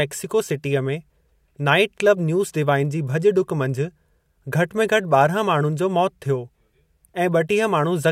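No technical faults can be heard anywhere in the speech recording, and the signal stays steady and intact throughout.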